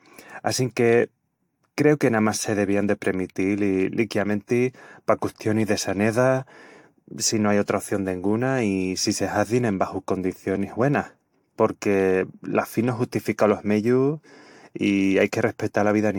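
Throughout the speech the sound is swirly, hollow and smeared, with softened consonant attacks. This is generation loss, likely from around five successive AAC-LC passes at a rate fitting 96 kbit/s. A spectrogram shows a hard ceiling at 19.2 kHz and fluttering spectral holes.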